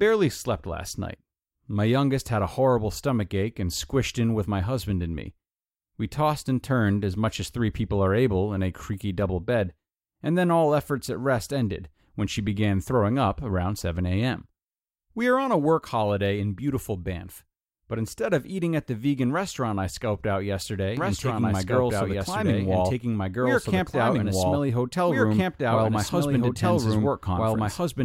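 At 20.97 s, just after "restaurant I scoped out", a doubled audio track starts abruptly and runs to the end. A full-band copy of the speech trails about a second and a half behind, roughly as loud, with no decay or room colour. The likely cause is a second, slower capture path or an edit holding two copies out of step. On a spectrogram each syllable's pattern reappears unchanged, shifted right by about 1.5 s, and the waveform fills in densely.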